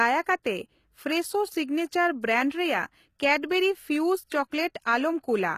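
From start to finish the speech carries plainly audible HE-AAC compression damage, likely from a low-bitrate encode around 20 kbps. The s sounds come out gritty and metallic. The rebuilt treble doesn't quite line up with the real harmonics below it, and nothing survives above about 14.9 kHz.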